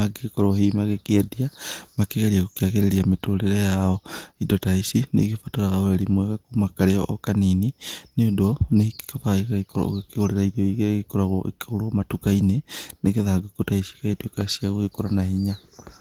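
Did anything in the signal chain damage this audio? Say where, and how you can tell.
No, nothing in the chain has damaged this speech, and the Opus voice compression on it is running at a light touch that doesn't show as any real harm.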